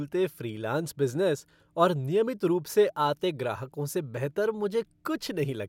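No technical faults can be heard.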